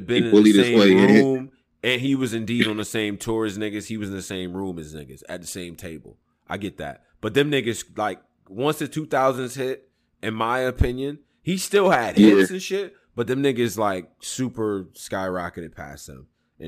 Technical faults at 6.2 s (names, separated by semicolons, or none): sample clock jitter